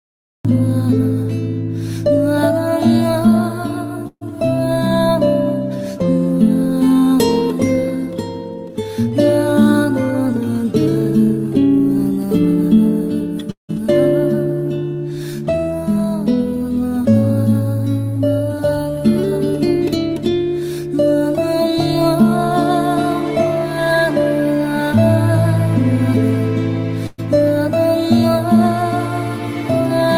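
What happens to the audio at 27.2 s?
A burst of packet loss ends there. From 27.07 to 27.2 s, the lost packets were concealed by stretching the last sound and fading it out, leaving a smeared, fading stripe on the spectrogram. Playback then resumes with about 120 ms of audio missing.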